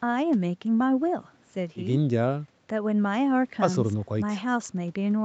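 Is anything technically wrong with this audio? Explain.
No, nothing stood out as a technical problem on listening to this speech.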